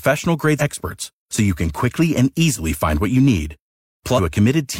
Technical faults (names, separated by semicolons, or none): damaged data in a compressed stream